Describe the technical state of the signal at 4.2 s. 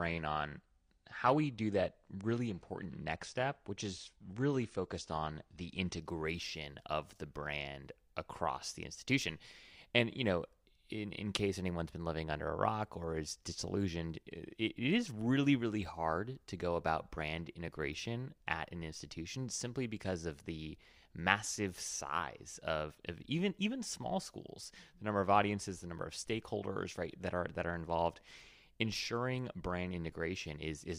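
Adaptive stream starting at a low bitrate, from 0.0 to 6.0 s: the player opened on a cheap version of the stream to start quickly, then stepped up after measuring the connection. At 4.2 s the speech has nothing above 9.8 kHz and stronger codec artefacts, which fits about 32 kbit/s AAC-LC. The quality rises abruptly at 6.0 s with no gap.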